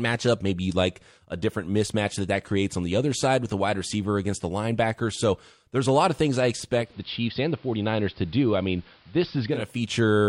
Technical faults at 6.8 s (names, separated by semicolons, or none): digital radio blending to analogue